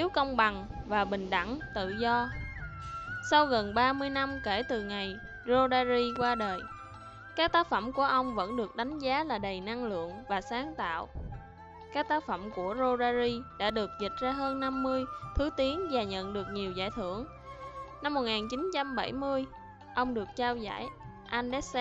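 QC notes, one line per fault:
6.16–6.24 s and 13.69–13.72 s, loud pop: a sudden voltage step or pulse, likely from a plug, switch, static or driver glitch, is added to the signal. This gives a double pop about 10 dB above the sound, then a single pop about 5 dB above, with the audio continuing underneath.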